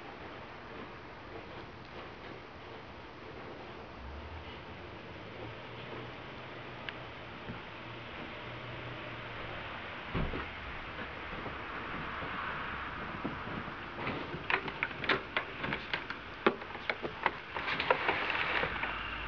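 Nothing stood out on listening to this audio.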